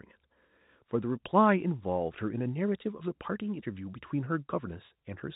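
Nothing in the speech counts as a fault; it has the narrow telephone-band character of G.711 coding, with nothing above 4 kHz and only the faint level-following grain that format carries.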